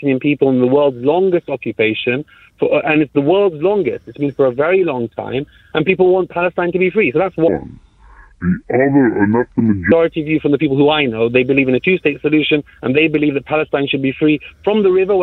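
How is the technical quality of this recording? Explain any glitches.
The recording has one clear glitch. A section at the wrong speed runs from 7.48 to 9.92 s, where the audio plays at about 0.655 times its proper rate. The likely cause is a clock mismatch during editing or playback, which stretches that passage in time. Because speed and pitch move together, everything in it turns slow and deep, dropping roughly seven semitones, before snapping back to normal speed and pitch at 9.92 s.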